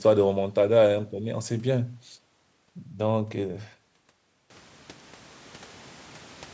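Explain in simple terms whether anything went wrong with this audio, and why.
Nothing went wrong with this audio; the background noise in the room simply gets louder at about 4.5 seconds, and that is part of the recording rather than a fault.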